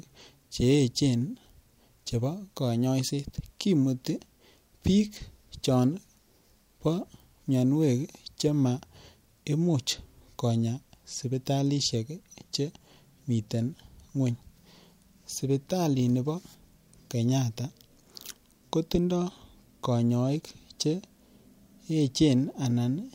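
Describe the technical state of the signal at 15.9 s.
At 15.9 s the speech runs intact, with no audible technical fault at that moment.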